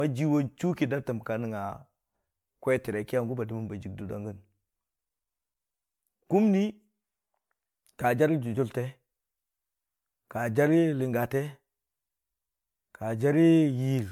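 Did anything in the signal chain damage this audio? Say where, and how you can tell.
Yes, the damage sits at the codec stage, as generation loss: the speech was most likely decoded and re-encoded around seven times through MP3, and the bandwidth ceiling near 19.9 kHz fits a 128 kbit/s encoder. Each new pass quantises on a shifted frame grid, so noise and spectral gaps pile up. Across the whole 14 s the speech sounds swirly, smeared and hollow, with consonant attacks blurred more than a single encode at that rate would cause.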